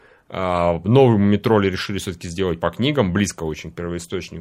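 No technical faults can be heard anywhere here.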